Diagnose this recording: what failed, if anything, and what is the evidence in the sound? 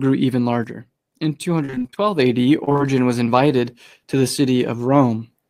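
One channel drops out from 0.64 s to 2.19 s. The speech falls abruptly by about 6 dB, then returns. That step is what a mono sum does when one side goes silent. The likely cause is a loose stereo lead or connector in the analogue wiring.

Repeated packet loss (robotic sound) occurs on the network from 1.65 s to 1.98 s and from 2.64 s to 2.84 s. The speech turns choppy, with pieces missing. Short holes of up to about 29 ms are patched by stretching the previous sound. Concealment covers roughly half of each span.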